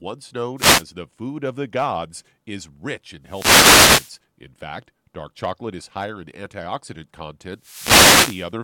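Short swishes of static are heard in the speech at 0.57–0.84 s, 3.24–4.18 s and 7.56–8.53 s: wireless microphone noise hits, where the FM radio link faded and receiver noise broke through.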